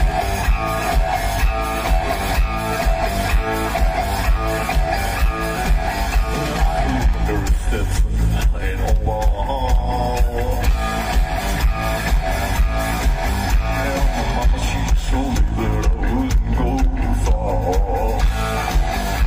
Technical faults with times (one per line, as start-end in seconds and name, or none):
9.05 compressed frames skipped